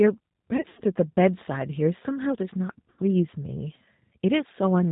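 Throughout, the speech sounds band-limited, rough and slightly synthetic, which fits the 8 kbit/s G.729 codec. Rebuilt pitch and pulses give it this texture, unlike plain low-pass muffling. From 0.57 to 0.81 s, VoIP packet loss concealed by the speech codec stretches the last sound into a fading buzzy tone or coloured noise, covering about 120 ms, longest gap 80 ms. At 2.90 to 3.00 s, roughly 80 ms is stretched out again, rather than the silence or clicks of a bare dropout.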